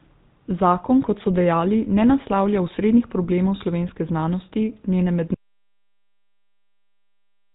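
Throughout, the speech carries the buzzy, gravelly roughness of the GSM full-rate codec, which fits its 13 kbps mode. The spectrogram shows nothing above 4 kHz. At 5.34 s, right after "slovenske znanosti njene", an audio dropout to silence begins, likely from lost input. The waveform stays silent through to the end, with no room tone at all.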